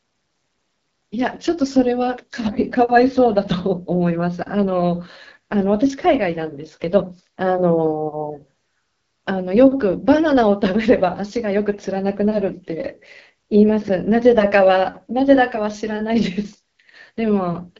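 Speech runs through the whole clip with AMR wideband (HD Voice) codec damage. It sounds rough and raspy throughout. Nothing is present above 7.5 kHz. The plain roughness fits one of AMR-WB's lowest rates, around 8.85 kbit/s, where the speech model is coarse.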